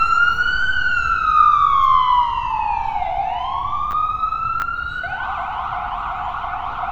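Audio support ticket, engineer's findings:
Chunks out of order at 3.91–3.93 s and 4.60–4.62 s: brief jumbled moments, 10 ms chunk replayed one slot late. Audio reshuffled, not dropped, unlike a dropout. Likely buffering/queueing stage.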